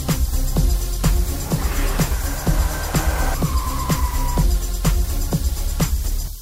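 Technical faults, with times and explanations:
0.0–2.46 s, mains hum: a steady 60 Hz tone, roughly 20 dB below the sound, where power-line current couples into the signal through a ground loop or nearby transformer. On a spectrogram it is a flat horizontal line at 60 Hz ending at 2.46 s.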